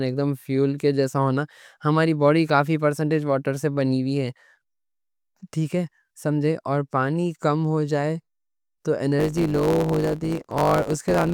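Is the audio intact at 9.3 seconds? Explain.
No. A block size mismatch (truncated) runs from 9.18 to 11.33 s: each block's tail is dropped, leaving a 100 Hz buzz and speech running about 1.07 times faster at roughly normal pitch, which fits 512-sample blocks.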